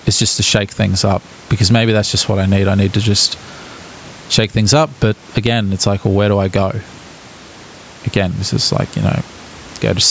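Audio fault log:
throughout, gain pumping: The input gain is likely set far too high, so a fast limiter keeps clamping down on each loud burst of speech and then releasing, with the level swinging by around 10 dB. The room noise sits about 34 dB under the speech. Loud and quiet passages land close together, and the speech, which carries nothing above 8 kHz, comes across squashed.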